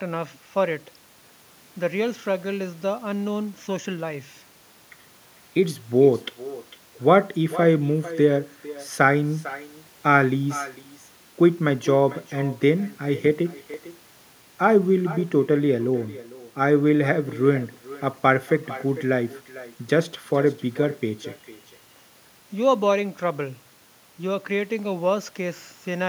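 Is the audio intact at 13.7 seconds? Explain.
No. At 13.74 s there is a block of digital silence: for about 0.67 ms, which fits a 32-sample block, the output drops to zeros with no fade, likely because a buffer went unfilled in time. It is so short that it is heard as a single tick rather than a hole. The hard edges tell it apart from a faded dropout or a concealed packet loss.

The moment also carries echo with no canceller. A copy of the speech returns about 17 dB quieter and roughly half a second late, and thinner, because the far end's loudspeaker feeds its microphone and nothing removes it. That distinct delayed repeat is what separates it from ordinary room reverberation, which would blur the sound rather than shadow it.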